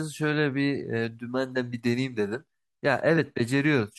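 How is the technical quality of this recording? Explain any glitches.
No technical faults can be heard in the recording: the signal holds steady throughout, with no dropouts, distortion or other glitches to explain.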